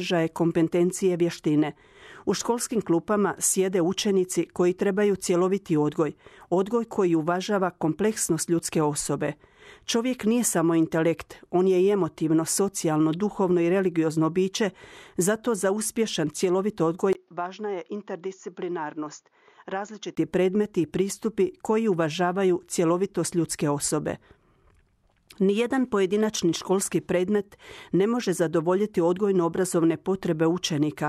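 At 17.13 s, just after "zato za uspješan cjelovit", a 20 ms gap opens and the speech turns duller and boxier: nothing remains above 7.1 kHz, the level falls by roughly 10 dB, and a faint new noise floor appears well below the speech. This is most likely an input switched to a poorer device, with the recording briefly coming from a narrower-band microphone. Full bandwidth returns at 20.17 s, before "predmeti i pristupi koji".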